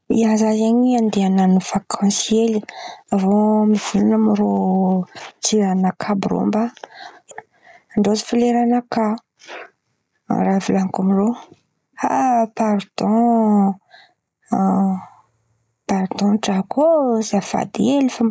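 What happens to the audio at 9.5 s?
At 9.5 s the audio is caught in gain pumping, which runs through the whole clip. The gain is pulled down by around 15 dB under every loud sound, likely because the gain is set far too high and a fast limiter keeps pulling it down. Loud and soft parts end up closer in level, and the sound is squashed.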